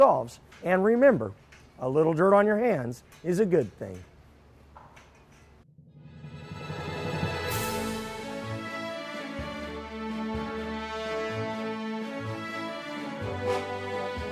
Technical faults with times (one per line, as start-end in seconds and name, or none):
none